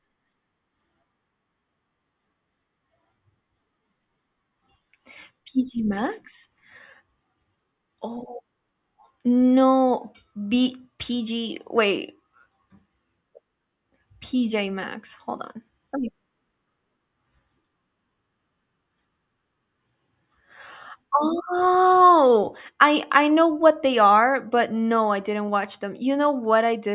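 No faults turn up anywhere in this recording on listening.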